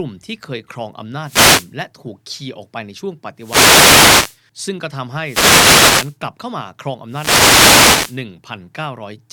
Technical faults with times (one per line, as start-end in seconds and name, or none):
1.19-1.74 wireless microphone noise hit
3.37-4.41 wireless microphone noise hit
5.20-6.17 wireless microphone noise hit
7.07-8.23 wireless microphone noise hit